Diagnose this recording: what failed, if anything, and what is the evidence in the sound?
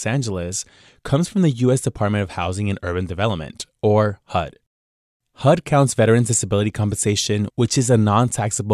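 Nothing failed here; the sound gives no evidence of a fault at any stage of the recording.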